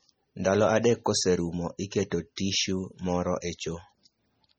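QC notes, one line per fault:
throughout, MP3 compression: The encoder is likely starving for bits, and the damage is heavy, which fits a low bitrate around 32 kbps. With so few bits, its hearing model zeroes the weaker frequency lines, and they flicker on and off from frame to frame. That gives the speech a watery, swirling texture, metallic chirping on s sounds and smeared consonant attacks. Nothing is heard above about 20.7 kHz.
2.36 s, pre-echo: A sharp attack lands late in a transform block. The quantisation noise meant to hide under that loud onset gets spread across the whole block, including the quiet moment before it. That produces a brief hiss of about 17 ms ahead of the attack, and the onset itself sounds softened and smeared instead of crisp.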